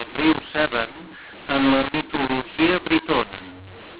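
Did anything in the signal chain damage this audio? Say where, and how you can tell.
Yes. A mu-law and A-law mix-up runs throughout the speech at the codec stage: G.711 telephone audio written as A-law is decoded as mu-law. The mismatched curves scramble sample levels, so the speech sounds harsh and distorted, and pauses fill with noise.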